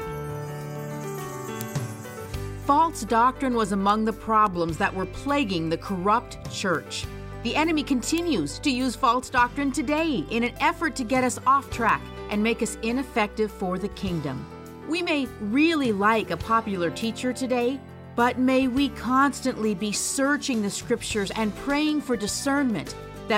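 A steady train of word clock ticks runs from 0.18 s to 23.32 s, some seventy sharp clicks of uneven strength arriving roughly every 0.3 s. That regular spacing, unlike random crackle or dropouts, points to an unlocked digital receiver whose clock drifts around 70 ppm from the sender's, slipping one sample at each tick.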